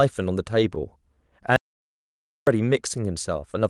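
At 1.56 s the speech cuts off abruptly into an audio dropout to silence lasting until 2.47 s. The gap is silent with no room tone, unlike a noise gate or fade, and likely comes from a lost input while recording continued.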